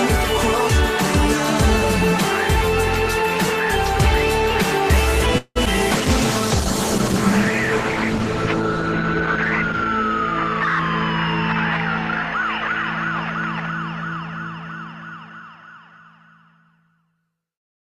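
At 5.38 s the audio stalls for about 0.2 s: the last sound carries on as a fading buzz that ends in roughly 40 ms of silence before the audio resumes where it stopped. This is a call audio freeze, likely caused by held-up packets draining the jitter buffer. On a spectrogram it looks like a smeared, decaying band followed by a short blank, with no content lost. Just after, at 5.66 s, a skip ahead drops roughly 70 ms of audio with almost no gap, so the two sides are spliced nearly directly. A waveform shows an abrupt join. From 5.96 s to 9.92 s a call bitrate drop takes the encoder from 48 kbps down to 13 kbps, holding the low rate for about 3.9 s. The audio turns coarse and muffled. A spectrogram shows the upper frequencies sharply cut off and the remaining detail blurred until the bitrate recovers at 9.92 s. Between 14.92 s and 15.99 s a jitter buffer speed-up runs the audio at about 109% with unchanged pitch, removing roughly 100 ms as many tiny pitch-period cuts to shrink an overfull buffer. 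The result sounds hurried, and the waveform there looks slightly compressed in time.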